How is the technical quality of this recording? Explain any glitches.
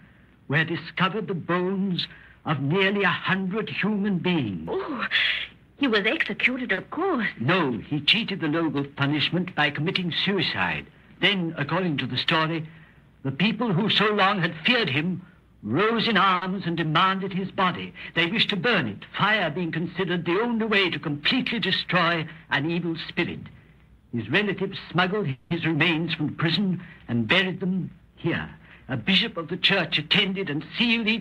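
The recording has timing glitches from a network jitter buffer: two short stalls, one longer freeze and three speed-ups.

Short stalls from a late packet occur at 6.73 to 6.79 s and 16.36 to 16.44 s. A packet arrived late, and the buffer ran empty. The receiver stretched the last sound by 40 ms, then 60 ms. Nothing is lost. The sound just hangs briefly.

A call audio freeze spans 25.31 to 25.52 s. The last sound is carried on for 190 ms, with no silence, and then the audio resumes where it stopped. Nothing is missing. The likely cause is packets held up in transit, emptying the buffer.

Jitter buffer speed-ups occur at 11.14 to 11.57 s (108%), 22.16 to 22.69 s (110%) and 27.46 to 29.03 s (108%). The buffer had grown too full. The receiver cut out short pitch-period pieces to catch up. The audio sounds hurried at unchanged pitch.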